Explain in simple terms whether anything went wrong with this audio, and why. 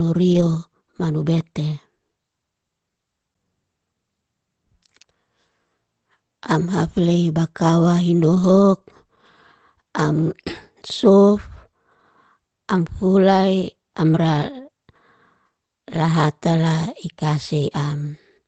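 Twice the call lost a short run of data packets, and each time the system fell back on backup copies carried in the packets that followed, a repair called lost packet rebuilt from error correction. There is no silence, but the speech turns rougher and noisier from 0.33 to 0.55 s and again from 8.31 to 8.49 s.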